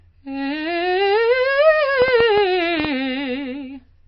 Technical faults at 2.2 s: MP3 compression; train of clicks

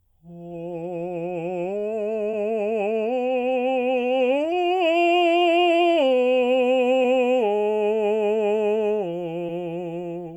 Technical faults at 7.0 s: short concealed packet loss

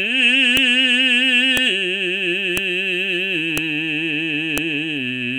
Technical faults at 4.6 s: file header played as audio

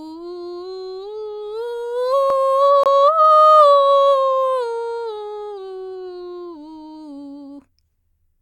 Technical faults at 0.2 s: none

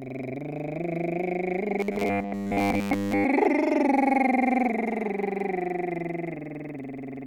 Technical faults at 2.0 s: robotic sound from repeated short buffers

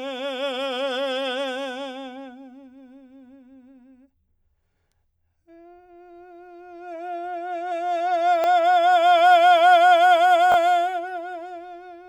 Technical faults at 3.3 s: none

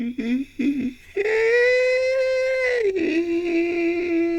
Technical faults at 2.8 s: none

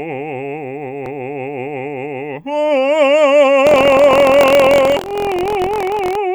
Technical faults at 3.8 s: buffer tearing

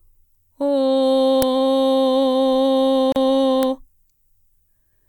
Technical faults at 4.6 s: none

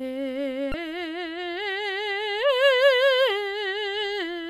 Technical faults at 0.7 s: damaged data in a compressed stream

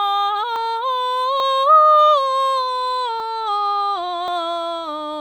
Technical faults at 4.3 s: dropped buffer (overrun)

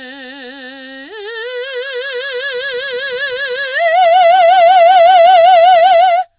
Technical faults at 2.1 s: aliasing

